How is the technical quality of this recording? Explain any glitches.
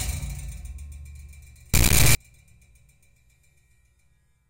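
The recording has one serious glitch. From 1.74 to 2.16 s there is an integer-read-as-float fault: 32-bit integer samples were interpreted as 32-bit float, so values land near zero or far past full scale. The sound becomes a harsh square-wave buzz flipping between silence and the clipping limit. Unlike ordinary clipping, which only flattens peaks, the original sound is replaced entirely.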